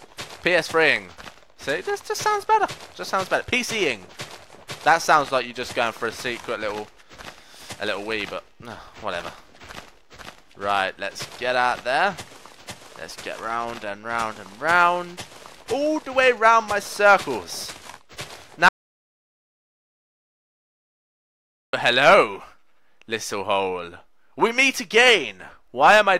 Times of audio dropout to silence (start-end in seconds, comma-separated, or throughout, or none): 18.69-21.73